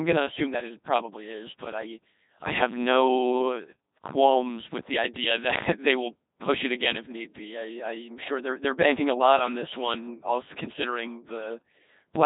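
Codec 2 vocoder damage runs from start to finish, heavy throughout, and the sound fits its 2.4 kbit/s mode. Only pitch, voicing, energy and a coarse spectral envelope survive the encoder; the decoder then rebuilds the speech from sine waves instead of the original waveform. The result is robotic and buzzy, with natural texture flattened into a synthetic hum, and nothing remains above 3.8 kHz, leaving the speech dull and band-limited.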